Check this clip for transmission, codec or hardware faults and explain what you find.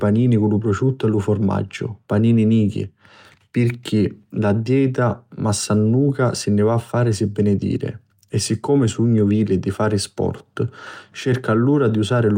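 Nothing stood out on listening to this speech recording.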